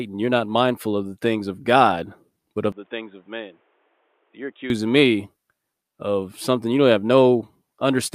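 Input switched to a poorer device, likely, from 2.72 to 4.70 s, right after "but of": the speech drops about 10 dB and turns dull, with nothing above 3.8 kHz and new background noise.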